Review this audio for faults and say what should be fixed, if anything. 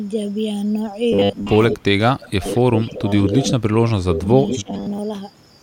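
From 1.13 to 4.99 s the speech turns into a stiff, metallic buzz pinned at 100 Hz. That's the robotic sound from repeated short buffers: audio arrives too late, so most of this stretch is the last roughly 10 ms chunk looped over and over instead of fresh signal. The likely fix is a deeper jitter buffer or steadier packet delivery.

There's an echo leak too, with delayed copies of the speech about 180 ms behind at 1.69, 2.24, 2.53 and 4.48 s. The ones at 1.69 and 4.48 s are fairly loud, only about 5 dB under the speech, and the other two are fainter. The far end's echo canceller likely isn't fully removing its loudspeaker pickup, so its convergence and tail length need checking.

Speech suppressed in double talk shows up as the speech ducking hard, up to about 20 dB, during 1.78 to 2.43 s, 2.83 to 3.13 s and 3.69 to 4.73 s. There's a milder dip from 3.29 to 3.52 s. The canceller likely can't tell this talker from the echo while both are active, so it turns everything down. 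Tuning its double-talk detector to be less aggressive should help.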